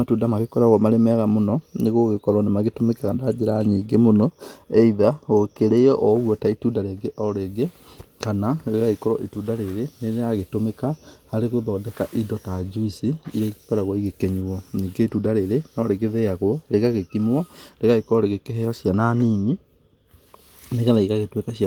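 Nothing stood out on listening to this speech clip; the Opus voice compression carries it in full band, with only light coding damage and content reaching up to about 20 kHz.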